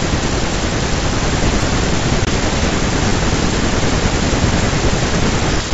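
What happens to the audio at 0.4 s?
Nothing goes wrong at 0.4 s: the speech there comes through intact, carried by G.722 wideband telephone coding at 64 kbit/s with no fault at that moment.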